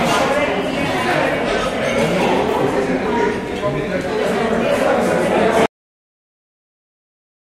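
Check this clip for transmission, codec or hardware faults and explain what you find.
One fault is present: a cut-off end. At 5.66 s the sound stops abruptly in the middle of an ongoing event and drops straight to digital silence, which lasts through the end of the file. There is no decay or tail. The final stretch of audio buffers was never written or played out, so the waveform is truncated mid-sound rather than fading or ending naturally.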